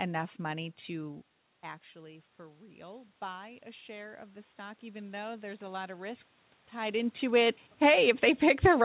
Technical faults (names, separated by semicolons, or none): automatic gain rising; automatic gain falling